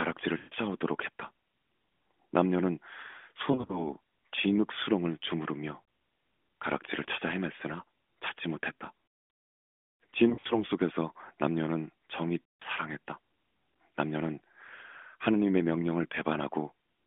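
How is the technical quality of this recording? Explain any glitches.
The recording is narrowband mobile speech, limited to roughly 200 Hz to 3.5 kHz with light codec coloration consistent with AMR-NB at 12.2 kbps. It is marred by lost AMR speech frames in five places.

At 0.38 to 0.54 s, 3.52 to 3.93 s, 5.82 s, 10.30 to 10.64 s and 12.44 to 12.63 s, corrupted frames failed their check. The decoder filled the gaps by repeating the last good pitch and vocal-tract settings at falling gain. The longest runs, at 0.38 s and 12.44 s, stretch the sound and fade it toward silence. The scattered losses at 3.52 s and 10.30 s produce brief dips and warbles.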